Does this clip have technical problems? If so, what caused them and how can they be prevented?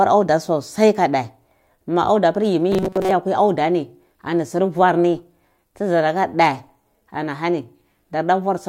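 Yes. Between 2.72 and 3.11 s, new audio was likely arriving too seldom, so the software kept replaying a short stretch of about 5.3 ms in place of most of the real signal. That repetition locks in a fixed 188 Hz buzz, a robotic sound from repeated short buffers that turns the speech rigid and metallic. A larger jitter buffer or more processing headroom in the audio path would keep fresh audio arriving on time.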